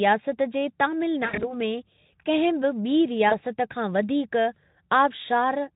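Right after "जे तामिल", from 1.25 to 1.54 s, there's VoIP packet loss concealed by the speech codec. About 120 ms goes missing in patches, the longest 80 ms, so the decoder stretches the last sound into a fading buzzy tone or coloured noise that stays weak until "में कंहिं". A shorter dropout at 3.29 to 3.35 s leaves a brief smear on the light Speex-coded speech.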